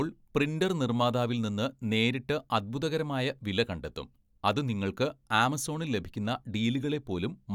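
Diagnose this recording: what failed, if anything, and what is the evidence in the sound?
Nothing in the signal chain failed: the speech arrives continuous and stable in level and timing, with nothing audible to attribute to any stage between capture and playback.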